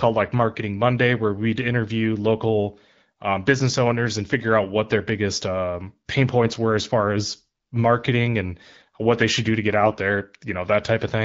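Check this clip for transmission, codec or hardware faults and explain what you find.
One transmission fault shows up near the end of the speech. From 9.82 to 10.00 s, AMR bit errors: a few percent of the weakly protected bits in the AMR-WB frames arrived flipped while the core checksum still passed, so excitation pulses landed in the wrong places and the finer pitch, gain and spectral values drifted. Over those 0.19 s, which fits about nine 20 ms frames, the voice keeps its rough pitch and level but turns hoarse, scratchy and gargly. Around it the 12.65 kbit/s wideband coding stays clear, with only light codec colouring.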